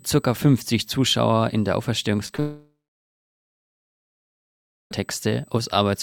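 USB whine runs through the whole clip. Current drawn by the USB bus in 125-microsecond microframes leaks into the audio path through the power or ground, putting a fixed tone at 8 kHz under the sound. It sits roughly 40 dB below the programme level, so it is a thin, steady, high-pitched whine. It never changes pitch.

From 2.26 to 2.39 s there is repeated packet loss, which gives a robotic sound. Audio arrived with four short holes in quick succession, the longest about 19 ms. The receiver bridged each one by extending the last fragment it had. About a third of that 120 ms stretch is patched-in material, so the sound stutters and takes on a choppy edge for a moment.

Immediately after, from 2.40 to 4.92 s, comes a long network dropout. The likely cause is that the audio stream stopped arriving for about 2.5 s. The receiver first extends the last received sound as a brief fading buzz. After that, roughly 2.2 s is left as silence or a faint steady floor. 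The audio resumes at 4.92 s, and everything that should have filled that gap is simply missing.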